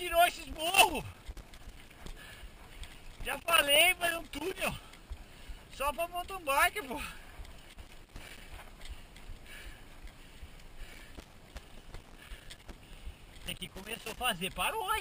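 A worn or dirty contact somewhere in the signal chain is making and breaking as it shifts, which produces loose connector crackle. Each break chops the signal, so the audio gets irregular bursts of scratchy crackle. This happens from 0.38 to 2.18 s, from 2.91 to 4.70 s, from 7.70 to 8.41 s, from 10.93 to 12.73 s, and from 13.46 to 14.17 s.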